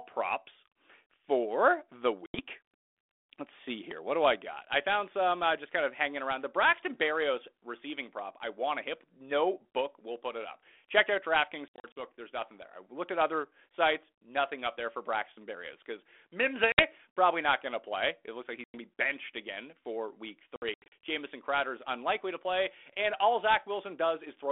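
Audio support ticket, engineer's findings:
Packet loss on an ADPCM call: five hard-edged silent gaps at 2.26 s (80 ms), 11.68 s (160 ms scattered over 280 ms), 16.72 s (60 ms, before "probably not going to"), 18.64 s (100 ms, between "looks like" and "to be benched again") and 20.56 s (200 ms scattered over 360 ms, after "benched again for week"). Lost packets are filled with silence, so the G.726 32 kbit/s decoder's predictor and step size drift from the sender's. Audio resumes slightly distorted, settling within tens of ms.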